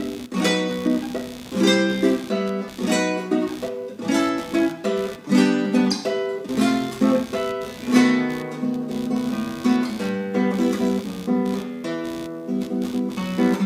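Computer activity noise runs throughout the clip. Processor, graphics or mouse load shifts the audio circuit's shared ground, adding pulsing noise near 70 Hz, roughly 20 dB below the sound.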